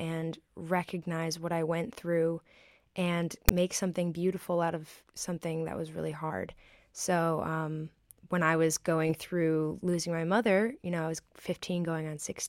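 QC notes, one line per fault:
3.49 s, file tags played as audio: a short block of text tags and their zero padding was read by the decoder as if it were sample data, just after "I went through and" and before "something beautiful out of". The character bytes come out as a harsh, loud rasp pushed off-centre, because text values cluster on one side of zero, and the padding then drops to dead silence, so the speech is broken by a hard-edged click of static.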